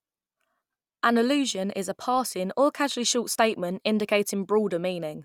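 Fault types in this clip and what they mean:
No technical faults can be heard in this speech recording. There is nothing in it that calls for a fault entry.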